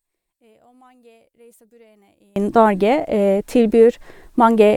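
Speech, and for the first 2.36 s it nearly disappears when summed to mono, dropping about 36 dB, most likely one channel inverted so the shared centre cancels.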